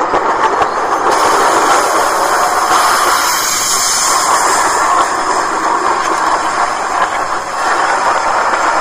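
Hard clipping runs through the whole clip: the signal was driven about 9 dB past what a stage in the chain could pass, so roughly a couple of percent of samples hit the ceiling and were cut flat, adding high harmonics heard as a harsh, crackly fuzz on loud peaks.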